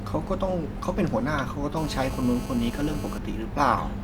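A hard, raspy GSM phone buzz cuts across this speech clip from 1.77 to 3.18 s, sitting about 15 dB below the speech. Its 217 Hz repetition and dense harmonics come from a nearby 2G phone on a call, whose transmit bursts the audio circuitry rectifies, producing a steady buzz unrelated to the speech.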